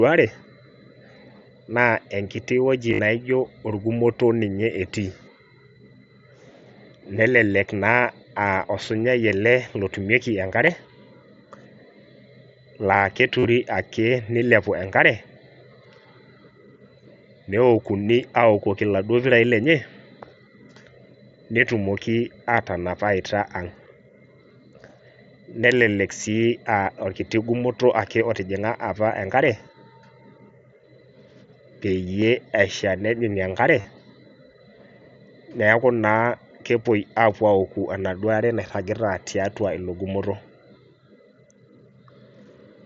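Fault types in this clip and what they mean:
Concealed Bluetooth headset packet loss at 2.90–2.99 s, 8.67–8.69 s, 13.39–13.45 s, 32.20 s and 33.81–33.85 s: stretches of audio never arrived from the headset, so the receiver filled each gap by repeating the closest-matching recent waveform. The longer runs around 2.9 s and 13.4 s, about 50 ms each, become a brief buzzy held tone with a slight warble as genuine sound resumes.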